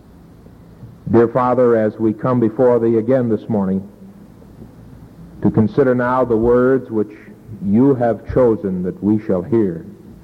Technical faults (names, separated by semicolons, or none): none